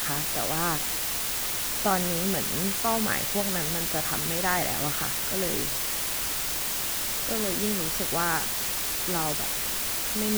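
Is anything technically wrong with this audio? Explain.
Yes, there's a clear problem. From start to finish the speech sits under a constant, even hiss that's nearly as loud as the voice itself. That's low bit depth with dither: the audio has been reduced to very few levels (the noise floor suggests around 3 bits), with dither added before rounding so the quantization error turns into steady white noise instead of gritty distortion. The voice stays clean-edged, just buried in that uniform hiss.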